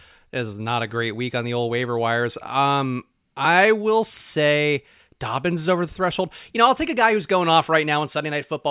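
No technical faults can be heard anywhere in the speech.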